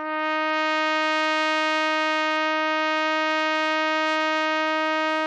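No technical faults can be heard anywhere in this music. Nothing in it calls for a timed description.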